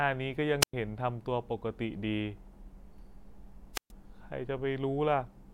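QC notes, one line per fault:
0.61–0.74 s and 3.73–3.91 s, wireless microphone squelch dropout: the FM radio link fades and the receiver's squelch mutes its output, leaving a hiss burst then near-silent holes of 104 ms and 127 ms.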